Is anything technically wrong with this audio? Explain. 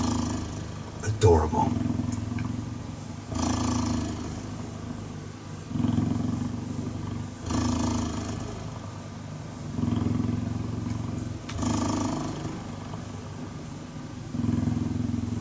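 No, nothing is technically wrong with this audio.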